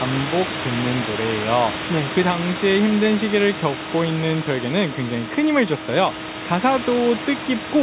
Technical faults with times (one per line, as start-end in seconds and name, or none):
none